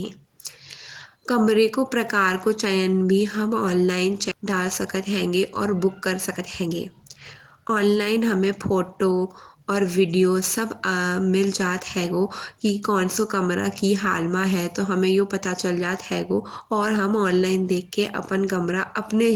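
At 4.31 s the speech skips ahead: about a second of audio is discarded while later packets were already queued, and playback jumps forward with no fill. The waveform shows an abrupt splice, and on the spectrogram the formant tracks break off and restart with no pause between them.

Two jitter buffer speed-up passes follow. From 4.41 to 6.69 s the speech plays at 112% speed, and from 7.56 to 9.26 s, ending just before "और वीडियो", at 108%. Short pitch-period chunks are cut repeatedly to drain the backlog, about 300 ms and 150 ms respectively. The speech sounds hurried at unchanged pitch. The harmonic spacing on the spectrogram stays constant while syllables compress in time.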